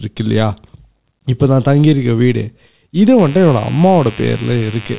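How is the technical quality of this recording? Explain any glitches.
The recording carries telephone-band speech with nothing above 4 kHz, and one fault. From 3.19 s to the end there is mains buzz: switching spikes at twice each 50 Hz cycle add harmonics heard as a steady, raspy buzz roughly 20 dB below the speech.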